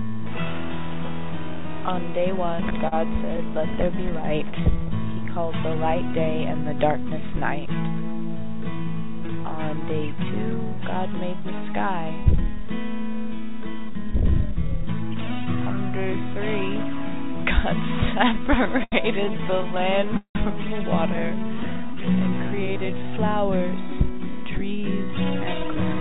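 From 2.52 to 3.40 s the sound catches and drags in a short stutter. These are repeated stalls: packets arrived late, the jitter buffer ran dry seven times, and the receiver stretched the last sound to cover about 100 ms in all, the longest hole 42 ms.

Between 3.86 and 4.85 s the sound slows to about 94% speed at unchanged pitch, with drawn-out sounds. This is a jitter buffer slow-down: with its reserve low, the receiver repeated single pitch periods, adding 70 ms to refill.

A much heavier stutter runs from 18.64 to 20.37 s. It is the same repeated stalls fault, with 23 empty-buffer moments and 470 ms of continued sound, over a quarter of that stretch. The longest, 182 ms, is faded.

From 21.11 to 24.07 s a second jitter buffer slow-down pulls the sound down to 87% speed, with drawn-out sounds, as 396 ms of repeated pitch periods rebuild the buffer. Over 21.14 to 22.05 s, scattered short gaps add small ticks and hiccups. 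Roughly seven isolated late or lost packets, none longer than about 15 ms, were each patched by continuing the previous sound.

From 25.56 s to the end the sound hurries to about 113% speed without a pitch change. This is a jitter buffer speed-up: the buffer held more audio than its target, so the receiver cut short pitch-period pieces to shed the delay.

Throughout, nothing is heard above 4 kHz, which points to a narrowband call codec such as 64 kbps G.711 mu-law.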